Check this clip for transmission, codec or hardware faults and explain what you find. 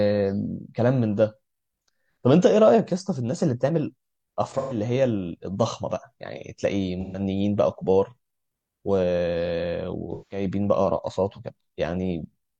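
AAC frame loss with concealment occurs three times, at 4.57–4.77 s, 7.01–7.20 s and 10.13–10.45 s. The decoder patches each gap of about 128 to 171 ms, which fits three or four lost frames, from the last good spectrum, so the speech turns briefly smeared and noisy.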